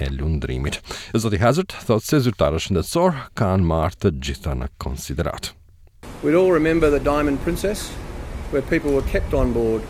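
Right near the end, at 9.45 s, there's a bit error spike: a single sharp tick that pops out of nowhere and has nothing to do with the surrounding sound. It's two consecutive samples where a flipped bit in memory or on a digital link threw the value off by a power of two before it snapped straight back. It only reaches about -30 dBFS, so it's a small, broadband click rather than a loud crack.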